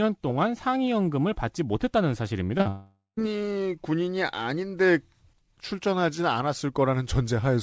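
Short concealed packet loss hits this speech clip at 2.58 to 2.62 s and again at 2.62 to 2.67 s. About 20 ms and then 40 ms of audio arrived too late, and the receiver bridged each gap by extending the preceding sound before blending back, leaving a brief smear. A long network dropout follows from 2.69 to 3.19 s. Roughly half a second is missing, and the concealment carries the last sound forward as a decaying buzz or hiss that gives way to about 130 ms of silence before the audio resumes without the lost part. The likely cause is a network interruption. The call path itself contributes its coding noise and nothing above 8 kHz, which fits a G.722 wideband codec.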